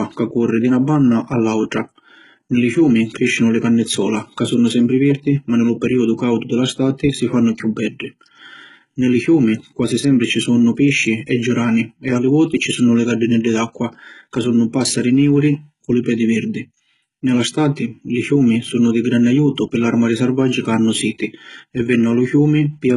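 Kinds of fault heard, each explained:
HE-AAC compression: The speech was likely passed through HE-AAC at a very low bitrate, with heavy damage that fits a rate around 12 kbps. Only the lower spectrum is properly coded, and the treble is rebuilt by copying lower bands upward under a coarse envelope. The top end sounds synthetic and stops dead at 11.2 kHz. S sounds come out gritty, metallic or lispy because the copied harmonics don't line up with the real ones beneath.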